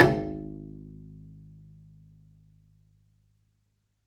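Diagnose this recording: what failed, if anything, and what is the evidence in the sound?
Nothing failed: no stage in the chain, from analogue wiring and conversion through buffering, processing, network, storage or playback, leaves any audible evidence of trouble in this recording of sounds.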